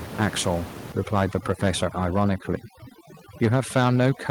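A noise reduction stage set far too aggressively takes hold from about 0.92 s and stays on to the end of the clip. This is overdone noise removal: the suppressor treats every frequency band that sits near its noise estimate as disposable and pushes it almost to nothing. The room noise, which sits about 15 dB below the speech, is gated away into near silence speckled with twinkling artefacts. Softer parts of the speech fall under the same threshold.

From 3.43 s to the end, the loudest syllables carry a harsh, crackling edge. The peaks run about 5 dB past the converter's limit, and a few percent of the samples are flattened at that limit. The cause is likely microphone overload: the input level was set too hot, and the converter shaved off the tops of the waveform, so each peak comes out gritty instead of clean.

At 3.45 s, speech and background together drop abruptly by about 2 dB, right on the heels of those distorted peaks. 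This is most plausibly the microphone volume being stepped down: the call software detects the overload and cuts the device's input gain in a single move instead of ramping it. The crackle carries on after the level change, because the reduction is too small to bring the peaks back under the limit.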